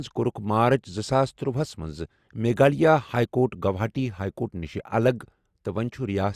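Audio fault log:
Nothing stood out on listening to this speech recording.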